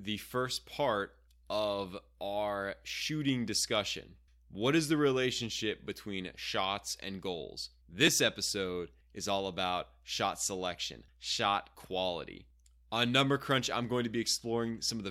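At 8.08 s the speech jumps forward with no gap of silence. The most likely cause is a dropped buffer (overrun): the capture side failed to collect a block of samples before the hardware overwrote it, so that block was lost and the audio on either side was joined directly. The missing piece is only a millisecond or two, so the discontinuity is very brief.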